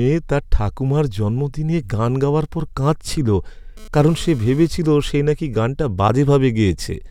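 From 3.77 to 4.68 s, GSM phone buzz intrudes. A nearby phone's rectified radio bursts make a raspy 217 Hz buzz, about 25 dB below the speech.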